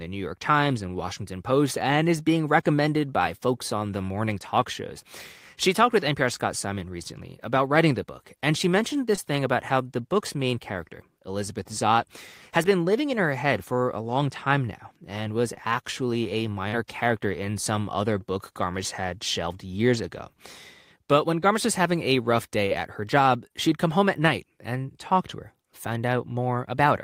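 Short concealed packet loss occurs six times in this speech: at 9.15–9.19 s after "book and she mentioned", 15.54–15.59 s, 16.69–16.74 s between "and was actually a" and "character in some other", 21.40–21.44 s, 22.66–22.72 s after "was having a rough", and 23.48–23.52 s. Each time, 20 or 40 ms of audio arrived too late. The receiver bridged the gap by extending the preceding sound before blending back, leaving brief smears or wobbles.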